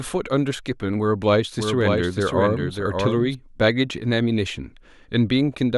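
From 1.59 s to 3.35 s the speech carries a doubled audio track: a second, full-band copy of the same speech sits roughly 0.7 s behind the original and a few decibels quieter. It has no reverberant tail or room colouring, so it reads as a distinct overlapping repeat rather than an echo, and it cuts in and out abruptly at both ends. The likely cause is a second capture path with extra latency being mixed back in.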